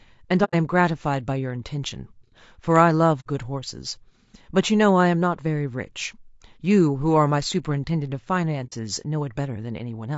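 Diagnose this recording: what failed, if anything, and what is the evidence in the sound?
The codec stage is at fault throughout. The speech sounds rough and grainy. Noise fills the gaps between harmonics, and the top band sounds thin and synthetic. This points to low-delay AAC compression, likely AAC-ELD at around 32 kbps. At this bitrate its coarse quantization leaves noise between the pitch harmonics.

Transmission also failed, with AAC frame loss and muting. There are three gaps: 0.44 to 0.55 s, 3.20 to 3.27 s, and 8.66 to 8.73 s. Each gap fades out and back in. The decoder zeroed the missing frames, and the overlapping windows smoothed the edges.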